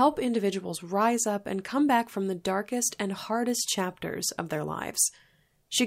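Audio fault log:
No faults can be heard anywhere in this speech recording.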